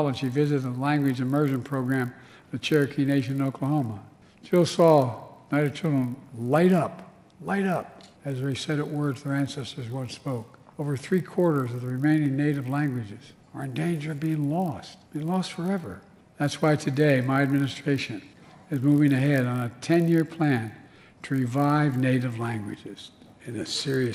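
The sample-rate converter restarted on every block, resampling each 20 ms block on its own, which fits a 24 kHz to 48 kHz conversion. Each block edge therefore carries a small error, heard throughout as a 50 Hz buzz riding on the sound whenever signal is present.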